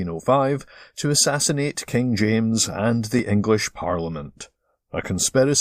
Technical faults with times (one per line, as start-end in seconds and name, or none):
1.19 overlap between stream segments
3.19 overlap between stream segments